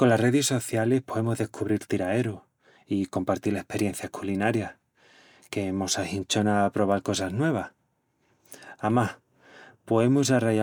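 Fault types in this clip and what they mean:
No technical fault is audible at any point, and the speech signal holds steady with nothing in it that points to a problem in capture, processing or transmission.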